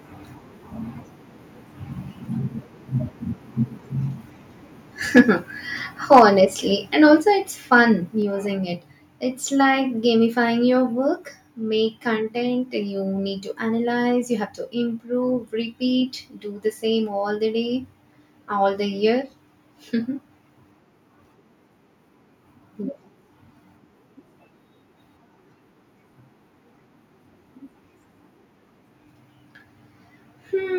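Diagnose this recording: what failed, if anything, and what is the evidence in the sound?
Harsh, crackling edges break up the loudest syllables at 5.16–5.21 s and 6.12–6.22 s, with peaks driven about 5 dB past the converter's limit. This is likely microphone overload at the converter: excessive input gain flattens the waveform tops.

Voice and background drop together, by about 2 dB at 6.19 s inside the second distorted peak, then about 4 dB at 7.2 s before "it's fun" and 8.22 s after "it's fun". This microphone volume stepped down likely comes from call processing cutting input gain after clipping.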